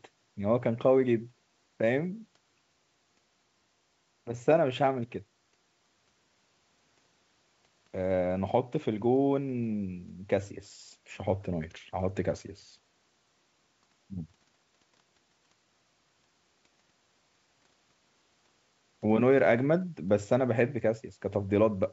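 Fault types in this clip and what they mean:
Nothing to list here: it's just speech coming over G.722 wideband telephone coding as normal, with nothing audibly going wrong along the way.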